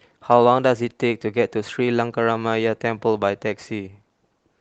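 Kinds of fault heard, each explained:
No faults are audible anywhere in this speech.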